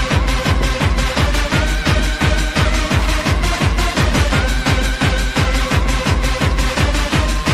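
No technical faults can be heard anywhere here.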